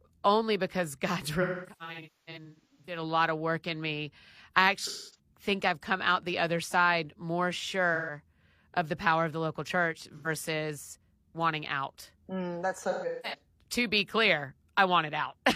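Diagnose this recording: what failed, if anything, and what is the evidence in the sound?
The failure is at the codec stage: AAC frame loss with concealment, hitting the speech at 1.42–3.02 s, 4.86–5.19 s, 7.95–8.16 s between "the other side more" and "of the power of", 10.17–10.28 s after "of the local church", and 12.90–13.39 s before "to be clear". With frames missing, the decoder patches from the last good spectrum, giving smeared, noisy, phasey spots. The first stretch loses about a second, in gaps up to roughly 300 ms.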